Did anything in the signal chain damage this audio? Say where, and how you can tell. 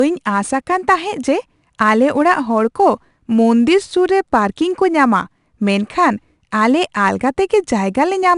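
Yes. The codec stage applied 4-bit ADPCM compression across the whole speech clip, likely at around 89 kbps. The sound is cut off above about 10.6 kHz, which fits a sample rate near 22 kHz. Each sample is coded as a coarse step from a prediction, so a gritty hiss follows every loud syllable.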